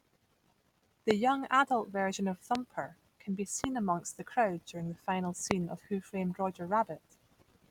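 Four loud pops, each about 20 ms long, cut through the speech: at 1.11–1.13 s, just before "young adult version of"; at 2.55–2.57 s, right after "young adult version of"; at 3.64–3.66 s, between "can be" and "amongst the crowd during"; and at 5.51–5.53 s. Each is a single sharp pop roughly 20 dB above the speech, the last nearer 25 dB, with the talking continuing underneath. A brief voltage spike, likely from a connector, switch or static, was added to the signal.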